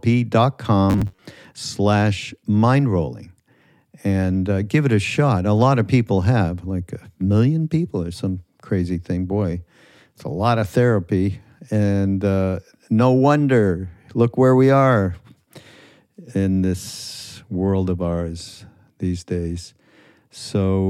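From 0.90 to 1.22 s the speech goes rigid and metallic: robotic sound from repeated short buffers. A fixed buzz near 93.8 Hz points to a roughly 10.7 ms chunk being looped, likely because new audio arrived too slowly, with about half the real signal skipped.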